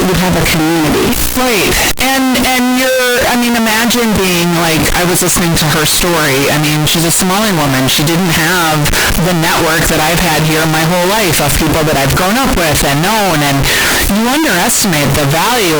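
Speech, and the whole way through it has the float-read-as-integer sound: a blaring, harsh, nearly square wave sitting at an almost fixed, high level, with background noise as loud as the talking. Likely the 32-bit float samples are being read as 32-bit integers.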